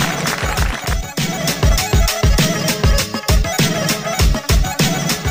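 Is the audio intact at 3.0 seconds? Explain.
Yes, at 3.0 seconds the audio is intact, with no dropout, click, distortion or other fault at that point.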